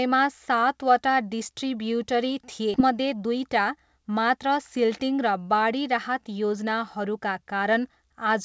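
Just after "सातवटा डिस्ट्रिब्युटरी थिए", at 2.74 to 2.76 s, the speech lurches forward: about a second of talk is simply gone, and the two sides are butted together with no silence or fill between them. This is a skip ahead. The receiver had a backlog of later audio waiting, so it discarded roughly a second's worth rather than play it late, cutting the listening delay by about the same amount.

From 2.84 to 4.46 s the talker sounds rushed, running at about 109% of normal pace while the pitch stays unchanged. This is a jitter buffer speed-up. With more audio queued than the buffer aims to hold, the receiver repeatedly trimmed out tiny slices a pitch period or so long, removing around 150 ms in total to pull the delay back down. Throughout, the sound has nothing above 8 kHz, which fits a wideband call codec such as G.722.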